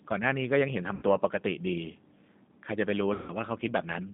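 Throughout, the speech carries G.729A codec damage at 8 kbit/s: the band sits between about 150 Hz and 3.7 kHz, and the pulse-based excitation gives a plainly rough, synthetic texture. VoIP packet loss, concealed by the speech codec, occurs at 0.95 s for 60 ms and at 3.14 s for 140 ms. The decoder extends its last pitch and filter into a fading buzzy tone or coloured noise, and the speech stays weak briefly afterward.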